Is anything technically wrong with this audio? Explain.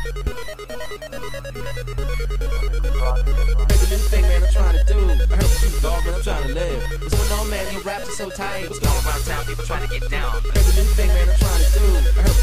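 No, no technical faults here.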